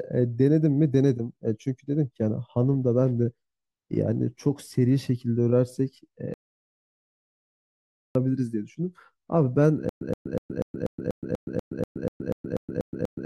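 At 6.34 s the speech falls into an audio dropout to silence lasting until 8.15 s, about 1.81 s of pure silence with no room tone. A single unbroken gap like this, rather than a stuttering pattern, likely comes from the input being lost while recording continued.

From 9.89 s to the end comes a stutter with silent gaps: a 123 ms fragment repeats 14 times, each followed by 120 ms of silence, every 243 ms. Unlike a dropout, the same sound keeps returning at a steady pace, likely a stalled player replaying its last buffer.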